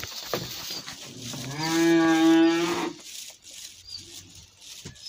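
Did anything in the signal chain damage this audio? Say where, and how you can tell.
Yes. Clock drift between sender and receiver hits the network jitter buffer. The sender's clock runs about 4% fast, so the buffer keeps overfilling, causing small, uneven timing hiccups throughout.

From 1.63 to 4.55 s, repeated timing corrections discard short pieces to catch up. The audio runs at 106% speed, with the edits unevenly spaced.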